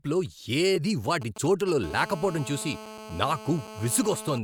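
Compressed frames skipped at 0.75 s: a piece of the compressed audio never reaches the output, because it was lost from the file or the decoder discarded it as damaged. The speech jumps forward by about one frame, roughly 30 ms, which fits a frame length near 26 ms.

GSM signalling bursts from 1.22 s to 1.84 s: a nearby 2G phone is exchanging short signalling transmissions with the network, as happens just before a call connects. The audio circuitry rectifies these radio bursts, producing a galloping dit-dit-dit of short buzzes at 217 Hz, around 15 dB below the speech.

GSM phone buzz from 1.84 s to 4.38 s: the phone is now in a call and transmitting continuously in bursts 217 times a second. Each pulse is rectified into the audio, giving a steady, hard, raspy buzz at 217 Hz, rich in harmonics and unrelated to the speech, at about 15 dB below it.

The compressed-frame skip recurs at 3.65 s under the buzz, again losing about one frame.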